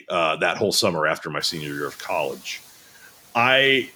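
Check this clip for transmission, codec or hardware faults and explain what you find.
One fault is audible, a processing fault rather than a transmission or hardware one. Noise suppressor catching up, from 1.40 to 2.34 s, just after "whole summer after my": the room noise jumps by about 22 dB at around one and a half seconds, and the suppressor's noise estimate needs 0.94 s to follow. The noise first passes with weak reduction, then sinks by about 4 dB as the estimate catches up, settling about 25 dB below the speech.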